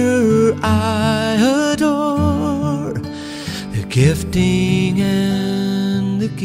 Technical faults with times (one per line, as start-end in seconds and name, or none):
none